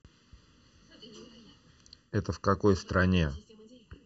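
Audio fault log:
Throughout, channel delay (comb filtering): the speech sounds hollow and phasey across the whole clip, thinned and slightly boxy, with a fixed coloration that never shifts. One channel arrives late by a little under a millisecond, and when the two are summed to mono the shared content cancels at evenly spaced frequencies. With a delay that short, the first notch sits around 700 Hz and the rest repeat up the spectrum, carving regular gaps.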